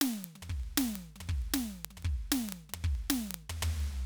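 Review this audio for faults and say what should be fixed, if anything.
The receiving device runs on its own clock, not locked to the sender's digital link, and drifts by around 500 ppm, so a single sample keeps slipping. These word clock ticks are sharp clicks of uneven strength, roughly every 40 ms (about a hundred), from 0.14 s to the end of the music. Lock the receiver to the source's word clock, or put a sample-rate converter on the input.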